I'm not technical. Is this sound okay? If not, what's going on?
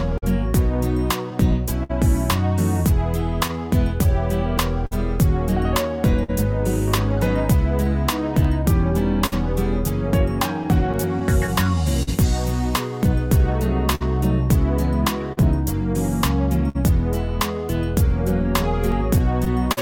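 No, the sound has three related problems.

Clock drift between sender and receiver runs through the whole clip. The sending device's clock ticks a few percent slower than the receiving one, so sound arrives a little too slowly and the receiver keeps running short. Unlike a single glitch, this never goes away. It causes small timing stumbles from start to finish, spaced unevenly rather than at a steady beat.

Repeated timing corrections, from about 0.12 s to 18.88 s, are the receiver's fix for that drift. It plays things back at about 99% speed and repeats tiny slivers of sound, adding roughly 150 milliseconds overall. You may hear a slightly uneven, dragging tempo or faint hiccups. Unlike dropouts, nothing is missing. The sound is stretched, always in the same direction.

Scattered short gaps appear in three stretches: about 0.18 to 6.30 s, 8.43 to 12.09 s, and 13.95 to 19.79 s. Small bits of sound arrived late or not at all, around seven gaps in each of the first two stretches and around ten in the last. 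Each hole was patched by extending the sound just before it, the longest lasting well under a tenth of a second. These are heard as brief ticks or smears, not silences.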